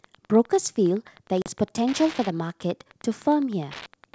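Through the whole clip runs Wi-Fi interference: a nearby radio's beacon, repeating every 102.4 ms, is rectified by the audio circuit and heard as a steady tick just under ten times a second, sitting around 25 dB below the speech. On a spectrogram it appears as a comb of thin vertical broadband lines at even spacing, continuing through pauses. In the waveform it shows as small regular spikes riding on the signal.

From 1.42 to 1.51 s there is packet loss on an ADPCM call. About 40 ms of audio is missing and replaced by silence, which points to a couple of lost packets. Because the decoder's adaptive predictor and step size no longer match the sender's when audio resumes, the return is disturbed until the decoder settles by about 1.51 s. The spectrogram shows a hard-edged blank column, and the waveform shows a flat gap with an abrupt restart. The G.722 wideband coding at 64 kbit/s carrying the speech contributes at most faint codec damage.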